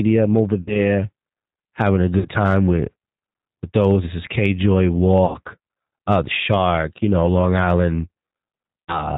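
From the start, the speech has the rough, slightly synthetic sound of the G.729 codec, which fits an 8 kbit/s G.729A stream. It's rebuilding the voice from a filter, a pitch guess and a few pulses per frame, so nothing above 4 kHz survives and the damage is plainly audible.

Then there's VoIP packet loss concealed by the speech codec at 0.62 s, 2.19 s, 5.25 s and 8.87 s. Each dropout lasts roughly 0.1 to 0.2 s and points to about 30 to 90 ms of lost audio. The decoder stretches the last pitch and filter into a buzzy tone or coloured noise that fades, and the voice stays weak or distorted until the prediction recovers.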